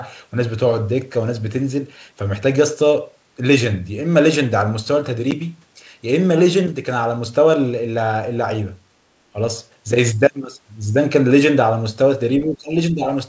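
At 5.31 to 5.34 s the speech drops out in a hard-edged hole, with about 10 ms of audio gone, which fits a single lost packet. This is packet loss on an ADPCM call. Because ADPCM codes each sample as a step from a prediction, the decoder's predictor and step size lose track of the sender's across the gap and need a moment to realign. On the waveform it shows as a flat stretch with abrupt edges. A spectrogram shows a thin vertical blank stripe cutting across all frequencies.

Later come three brief dips in level, most likely speech suppressed in double talk. Here an echo canceller, unable to separate the talker from echo of the far side, turns the talker down. The first, at 9.33 to 9.37 s, is a quick duck of about 10 dB. The deepest, at 12.44 to 12.75 s, sinks about 25 dB for roughly 300 ms, so the speech nearly vanishes. A third, at 12.91 to 13.07 s, drops about 10 dB. The waveform envelope pinches inward at each spot, and the spectrogram's energy fades to a paler band.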